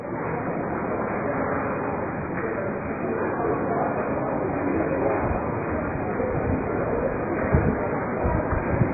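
Likely heavy AAC compression at a very low bitrate, around 12 kbps, throughout: nothing survives above 2.5 kHz, leaving the sound dull, smeared and warbling.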